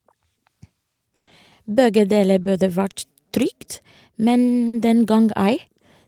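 Packets in this speech recording were dropped or arrived too late in two bursts of packet loss, from 1.15 to 1.29 s and from 4.67 to 4.75 s. The receiver stretched the last sound it had across each hole and faded it down. The first gap is about 120 ms and decays into roughly 80 ms of silence. The second is about 60 ms. In both cases the speech resumes further along, with that stretch lost. A short concealed packet loss at 2.43 to 2.47 s left about 20 ms for the decoder to invent from the preceding sound before blending back. It comes across as a quick smear or wobble.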